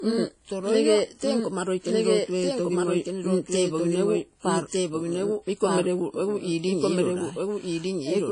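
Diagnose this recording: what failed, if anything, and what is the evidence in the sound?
The speech plays twice throughout. A second full-band copy trails by about one second at roughly the same level, with no decay or room colour. That rules out acoustic echo or reverb: this is a doubled audio track, likely from a slower second capture path or an edit holding two copies out of step.

At the codec stage, codec damage is plainly audible across the whole clip. It sounds ringing and washy, with hiss that breathes with the speech and nothing above 10.1 kHz. Noise smeared over tens of milliseconds, rather than a clean band-limit alone, points to WMA compression, likely at a low bitrate fitting 32 kbps.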